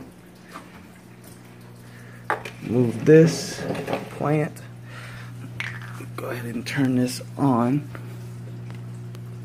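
No technical faults can be heard anywhere in the clip. There is nothing to mark in time and nothing that went wrong to describe.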